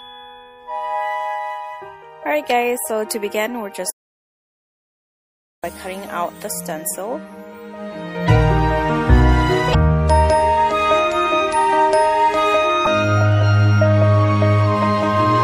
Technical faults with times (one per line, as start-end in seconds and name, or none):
0.00-15.44 MP3 compression
3.90-5.64 audio dropout to silence
8.25-8.28 damaged data in a compressed stream
9.71-9.75 damaged data in a compressed stream
12.83-12.87 damaged data in a compressed stream